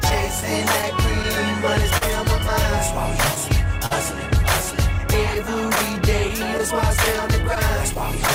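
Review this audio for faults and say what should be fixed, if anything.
Clock drift between sender and receiver runs through the whole clip. The sending clock runs roughly 2 percent slow, so the jitter buffer keeps draining and the receiver has to stretch or repeat small slices to keep playing. The result is small timing hiccups at uneven intervals. Dropouts would bunch around network trouble, but these recur across all of the audio and sit on a steady underlying pace error. Locking both ends to a common clock, or resampling adaptively at the receiver, would prevent it.

Scattered short gaps appear in two stretches, from 0.09 to 1.25 s and from 5.35 to 8.30 s. The first holds about four tiny holes, none longer than about 10 ms. The second holds around seven, the longest near 15 ms. Each was a lost or late packet that the receiver patched by continuing the last sound, so nothing is actually missing, only brief ticks and smears. 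Unlike the drift, they cluster in these windows. Forward error correction or modest redundancy would cover them.

A short stall from a late packet occurs twice, at 1.97 to 2.03 s (38 ms held) and at 3.86 to 3.93 s (43 ms held). Each time the packet arrived late, the buffer ran empty, and the last sound was stretched until playback resumed from the same point. This is one held moment with a slight buzz or dip rather than a scatter of ticks, and no content is skipped. A slightly deeper adaptive jitter buffer would absorb delays of this size.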